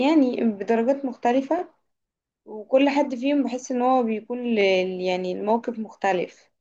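At 1.59 to 1.61 s, and again at 4.61 to 4.64 s, you get overlapping chunks. The speech was handled in 3-second blocks, and each new block starts about 25 ms before the previous one actually finished. That same 25 ms sliver plays twice at each join. You hear it as a quick click or tiny stutter, and the two hits land about 3 s apart.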